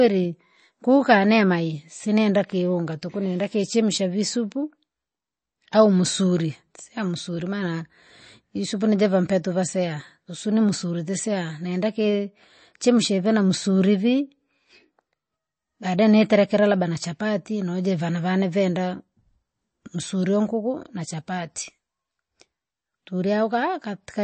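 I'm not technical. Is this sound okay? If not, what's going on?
No, not quite. The whole clip has a dull, clearly watery quality, with nothing at all above about 8.4 kHz, so s sounds lose their crispness. That's likely MP3 compression squeezed too hard, which trims the treble and makes faint detail flicker.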